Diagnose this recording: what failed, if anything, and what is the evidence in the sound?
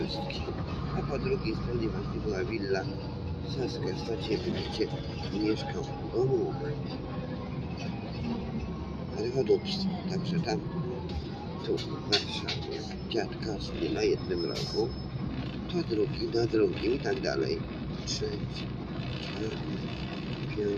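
The failure is in call processing: a noise suppressor applied to music or sounds, running for the whole clip. A suppressor tuned for speech treats sustained tones, ambience and reverb as noise. Onsets pass through mostly intact. Held material and decaying tails are pulled down as the gain reduction engages. The level swings by around 5 dB between attacks and sustains. That gives a pumping, fluttering quality and thins the tails throughout.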